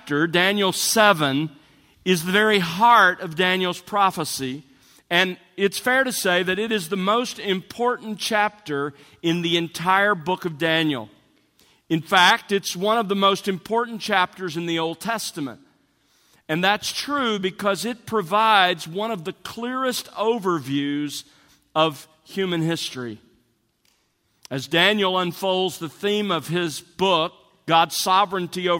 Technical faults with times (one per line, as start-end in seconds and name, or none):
none